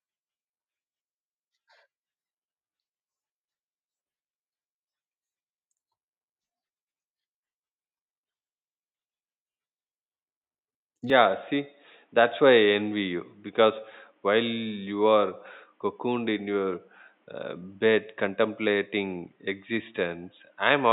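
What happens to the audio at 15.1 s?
At 15.1 s you're inside a stretch, from 11.10 s to the end, where the input has likely switched to a poorer device. Nothing above 3.8 kHz comes through, so the speech sounds dull and boxy, with a faint new background noise and no gap or level jump at the change.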